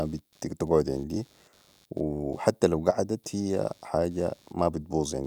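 Computer activity noise runs through the whole clip: changing load from the processor, graphics card or mouse disturbs the ground shared with the audio circuit, and that disturbance leaks into the recording. It comes through as a faint buzz of roughly 100 pulses a second, sitting around 35 dB below the speech. Because it follows the computer's activity rather than the speech, the buzz carries on under the pauses and does not rise with the speech.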